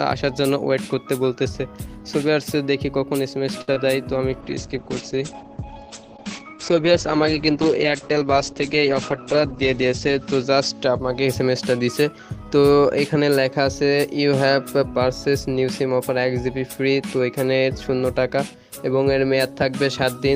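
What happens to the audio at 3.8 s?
Around 3.8 s, a short stall from a late packet runs from 3.61 to 3.81 s. The jitter buffer emptied and about 64 ms of sound was held. On a spectrogram it shows as frozen, smeared harmonics, and the waveform repeats flatly. Inside it, short concealed packet loss at 3.74–3.78 s drops 20 ms and patches it with 22 ms of continued sound. It shows as a brief blurred or noisy patch, heard as a brief smear or wobble.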